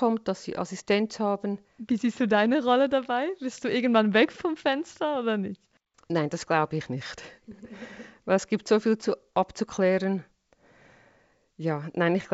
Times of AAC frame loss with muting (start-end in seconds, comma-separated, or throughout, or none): none